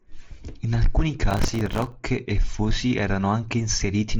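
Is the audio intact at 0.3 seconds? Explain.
Yes, at 0.3 seconds the audio is intact, with no fault at that moment.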